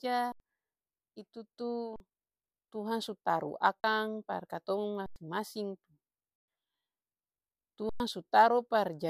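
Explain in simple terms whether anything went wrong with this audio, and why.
Yes, something went wrong. This speech clip has six underruns with held sample, at 0.32, 1.96, 3.80, 5.06, 6.36 and 7.89 seconds. Each time, the playback buffer ran dry. The output froze on its last value, so the sound simply stops for a moment. The gaps last 40 to 120 milliseconds. Some live audio was lost during each one, roughly a tenth of a second at most.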